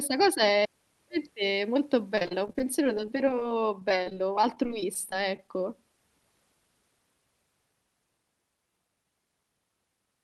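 From 2.15 to 3.55 s, the speech turns choppy and robotic. This is repeated packet loss. Short holes, up to about 29 ms each, are patched by stretching the last sound. The same robotic break-up returns from 3.80 to 5.49 s, sparser.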